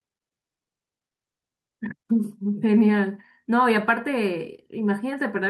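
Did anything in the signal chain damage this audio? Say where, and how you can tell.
No, none of the stages from capture to playback has left any audible damage on this speech recording.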